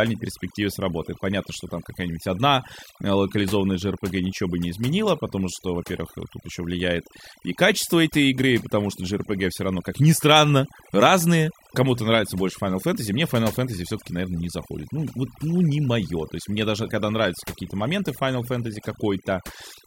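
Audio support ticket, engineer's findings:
Overdone noise removal, throughout the speech. Noise reduction stage set far too aggressive: bands near its noise estimate cut hard or gated off, taking low-level speech detail with them. Result: background drops and breaks up into twinkling specks; quiet parts of voice eroded. Likely a suppression threshold or reduction depth set too high.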